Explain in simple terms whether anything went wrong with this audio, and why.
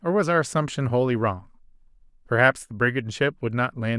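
Nothing went wrong with this speech recording. Listening closely, there is no moment where the sound breaks, jumps, or is damaged.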